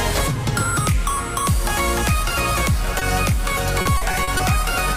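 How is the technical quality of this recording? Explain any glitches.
The recording has two network-related glitches, both late in the clip.

At 2.99 to 3.03 s there is a short concealed packet loss. About 20 ms of audio arrived too late for the decoder, which extended the preceding sound to fill the hole and then blended back. It is heard as a brief smear or wobble.

From 3.81 to 4.41 s there is repeated packet loss, which gives a robotic sound. Several gaps, the longest 40 ms and totalling 160 ms, were each patched by repeating the last sound. About a quarter of that stretch is synthetic, so it sounds choppy and broken up.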